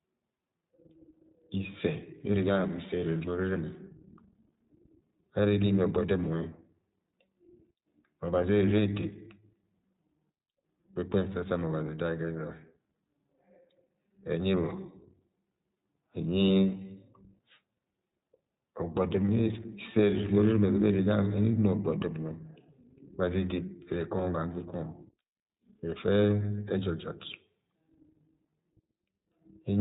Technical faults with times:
0.00-29.81 iLBC codec

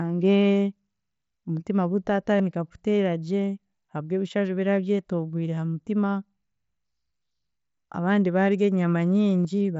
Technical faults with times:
2.38 concealed Bluetooth headset packet loss
5.56 concealed Bluetooth headset packet loss
9.44 concealed Bluetooth headset packet loss

